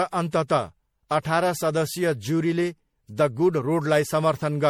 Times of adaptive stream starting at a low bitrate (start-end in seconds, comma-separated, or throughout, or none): none